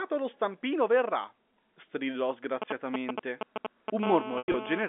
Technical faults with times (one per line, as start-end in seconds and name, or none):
2.62-4.04 GSM signalling bursts
4.04-4.83 GSM phone buzz
4.38-4.54 packet loss with pitch repetition